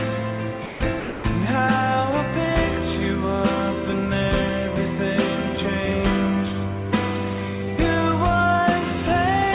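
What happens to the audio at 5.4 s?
Nothing goes wrong at 5.4 s; the audio continues intact through that moment, band-limited to about 4 kHz by the narrowband call path as it is throughout.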